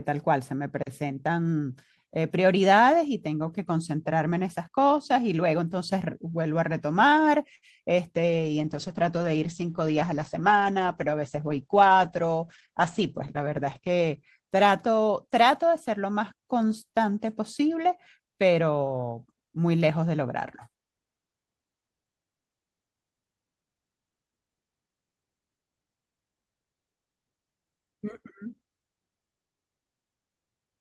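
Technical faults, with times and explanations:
7.55 to 7.65 s, short stall from a late packet: a packet showed up late, the jitter buffer ran dry, and the receiver stretched the last bit of sound for 68 ms until it arrived. Nothing is lost, but the sound hangs briefly with a faint buzz or dip, and the delay grows by 68 ms.
8.18 to 15.9 s, call bitrate drop: the bandwidth estimate fell and the encoder went from 32 kbps down to 9 kbps, sitting at the bottom for about 5.7 s. Coarser coding makes the speech rough and watery, and the top end is cut from 20 kHz to 8 kHz, so it sounds muffled.
12.36 to 13.5 s, jitter buffer speed-up: the buffer was holding more audio than it wanted, so the receiver trimmed out small pitch-period chunks, around 70 ms in total. The speech runs about 5% fast at the same pitch and sounds hurried.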